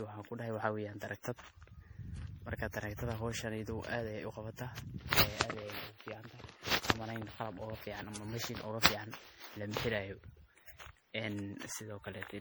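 From start to finish the speech carries generation loss. It has that swirly, hollow character, with consonant attacks smeared and softened, and it sounds worse than a single MP3 pass at what seems like 64 kbit/s would explain. The likely story is that it's been decoded and re-encoded around ten times. Each pass quantises on a fresh frame grid, so the noise and spectral holes keep stacking up.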